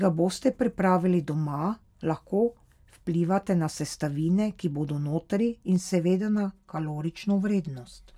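From 5.76 s, just after "sestavine ki bodo notri", and continuing to the end of the clip, the speech turns hollow and phasey. This is channel delay (comb filtering): one channel arrives roughly 5 ms late, and when the two are summed to mono, content common to both cancels at regularly spaced frequencies. The first notch falls around 100 Hz, with further notches repeating up the spectrum, giving the voice a thin, tubular coloration.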